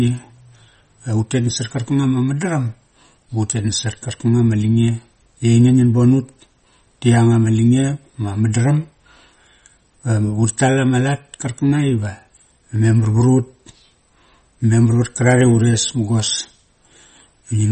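Throughout, the speech has a hard treble ceiling near 8.4 kHz and a watery, swirling texture on sibilants, likely MP3 compression at a low bitrate, around 32 kbps.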